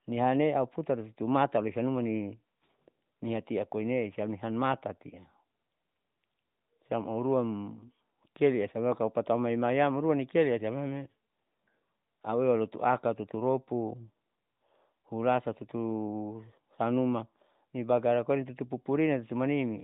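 At 11.26 to 11.28 s, a radio error corrupted one speech frame, about 20 ms, so it failed its checksum and the AMR decoder filled the gap from the previous frame's pitch and vocal tract settings at reduced gain. This lost AMR speech frame is heard as a brief dip or warble in the narrowband speech.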